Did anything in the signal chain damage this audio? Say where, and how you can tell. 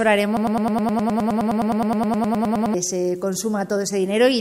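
Yes. From 0.37 s to 2.74 s a 104 ms fragment repeats exactly, back to back, 23 times, a broken-record loop, likely from a stalled playback or stream buffer resending its last block. Unlike an echo, the repeats don't decay, and the audio that should have played is lost.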